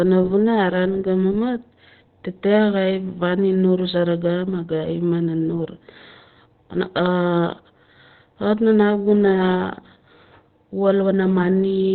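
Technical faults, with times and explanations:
Throughout, Opus compression, likely at a low bitrate. Nothing is heard above 4.3 kHz, so the speech sounds muffled. The damage is heavy, and the voice turns hoarse and rough. That points to Opus's SILK speech mode in narrowband, fitting a bitrate near 12 kbps.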